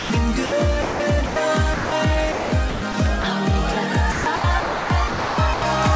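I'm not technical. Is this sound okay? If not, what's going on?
No. Short stretches of sound are missing and replaced by steady hiss, likely from sound dropped by the voice detector: 0–0.1, 0.46–0.52, 0.82–1.0, 1.26–1.36, 1.74–1.92 and 3.22–3.24 s. Each gap is a single clean break.

Sound chopped by the voice detector, from the same likely cause, differs by flickering on and off repeatedly, making choppy, patchy stretches from 2.32 to 2.94 s and 4.12 to 5.62 s.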